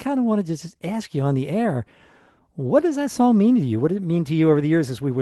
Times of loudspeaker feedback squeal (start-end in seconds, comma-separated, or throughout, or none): none